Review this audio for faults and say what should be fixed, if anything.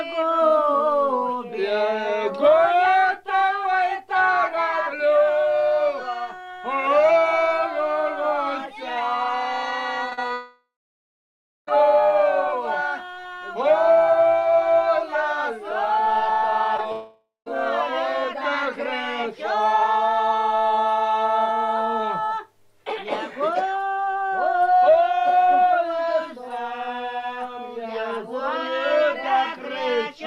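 Short concealed packet loss occurs at 10.09 to 10.13 s, 10.13 to 10.19 s, 10.27 to 10.32 s and 16.77 to 16.80 s. Each gap of 20 to 40 ms of data arrived too late to decode, so the receiver filled it by extending the preceding sound and then crossfading back. The result is a brief smear or wobble, bunched around 10.1 s. Prevention: a larger jitter buffer and forward error correction would let late or lost packets be recovered.

Long network dropout runs from 10.34 to 11.69 s and from 16.92 to 17.48 s, likely caused by a network outage. In the first, concealment stretches the last sound into a fading buzz or hiss, and almost a second of silence follows before the audio resumes. The second is shorter, with about 0.16 s of silence. The lost stretches never return, and both dropouts follow the short losses just before them. Prevention: a more stable network path or redundant transmission would keep the stream from stalling.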